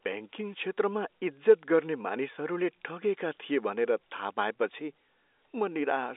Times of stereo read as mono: none

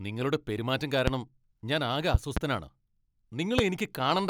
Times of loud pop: 1.07-1.10, 2.14-2.39, 3.59-3.61

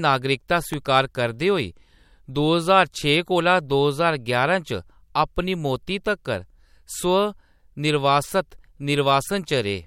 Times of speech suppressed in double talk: none

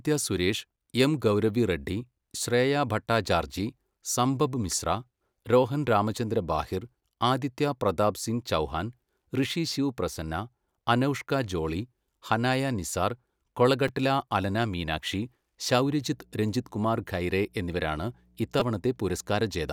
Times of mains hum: 15.78-19.73

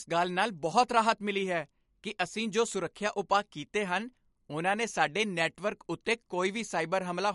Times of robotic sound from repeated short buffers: none

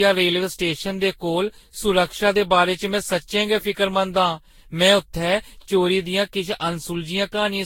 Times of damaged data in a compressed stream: none

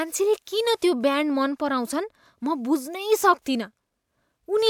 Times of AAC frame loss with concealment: none

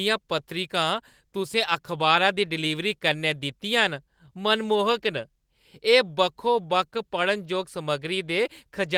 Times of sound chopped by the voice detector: none

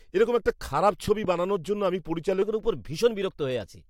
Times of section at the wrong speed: 2.42-3.89

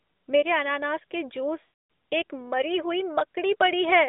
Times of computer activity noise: none

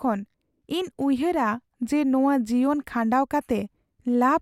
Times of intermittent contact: none

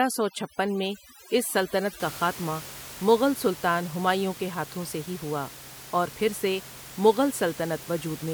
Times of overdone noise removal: 0.00-2.00

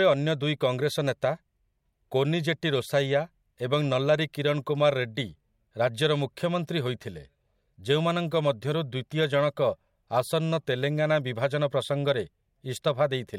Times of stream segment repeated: none

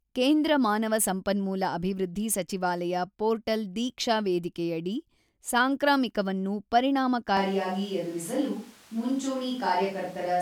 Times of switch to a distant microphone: 7.37-10.41

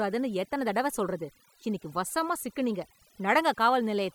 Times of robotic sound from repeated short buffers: none

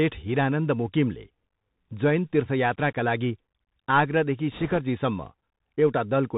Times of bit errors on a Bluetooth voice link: 4.52-4.79

